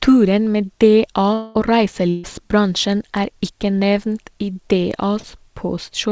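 A speech recording carried over a call link, with nothing above 8 kHz, which fits a wideband call codec such as G.722. From 1.34 to 1.57 s the talker's sound stops moving forward and is stretched into a buzz or hiss that fades for about 0.2 s before real speech returns. Roughly 220 ms of speech has simply gone missing. This is likely a long network dropout: no audio reached the receiver, so it kept extending the last sound instead of falling silent, then resumed further on without the lost part. At 2.09 to 2.26 s a shorter version of the same effect appears, a frozen, decaying buzz or hiss lasting about 140 ms, after which the speech jumps ahead. That is a burst of packet loss. Several consecutive packets, about 140 ms of audio, arrived too late or not at all, and the receiver held and faded the last sound across the hole before picking up again past the missing material. Near 5.2 s (5.20 to 5.25 s) there is only a brief smear or wobble of around 40 ms. 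This is short concealed packet loss: a few hundredths of a second never reached the decoder in time, and the gap was filled by continuing the preceding sound and blending back into the real signal.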